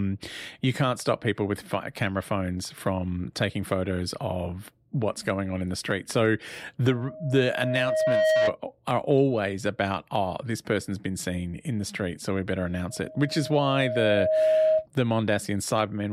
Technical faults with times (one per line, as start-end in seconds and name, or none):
6.90-8.57 loudspeaker feedback squeal
12.90-14.87 loudspeaker feedback squeal